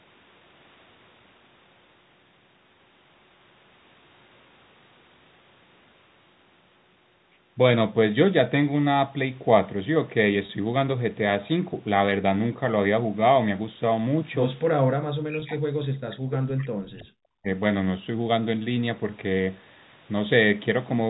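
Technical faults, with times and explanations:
10.46–10.49 s and 15.40–15.42 s, packet loss with pitch repetition: two short gaps of about 30 ms and 20 ms, both consistent with 10 ms packets, are bridged by repeating the last pitch period of the sound. Neither gap lasts long enough for the repeated cycle to fade fully to silence, so each sounds like a brief, slightly held, buzzy patch. The second one falls inside the suppressed stretch described below.
14.96–17.48 s, speech suppressed in double talk: for roughly two seconds in total within this span, the talker's level dips, falling by around 40 dB at its deepest. The likely cause is the echo canceller meeting simultaneous speech from both ends. Unable to separate the near talker from loudspeaker echo, it attenuates everything, so the voice dips.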